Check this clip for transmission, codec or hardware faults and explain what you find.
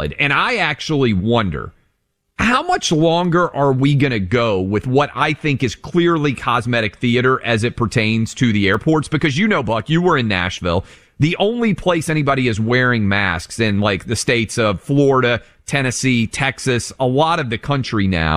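One fault stands out, a brief block of digital silence at 8.74 s in the speech. For about 2.9 ms the signal drops to silence with no fade, likely because the output buffer wasn't filled in time, in a way that fits a 128-sample block. Both hard edges merge into a single tick. Unlike a lossy packet dropout, nothing is smoothed or concealed; the signal simply stops and restarts.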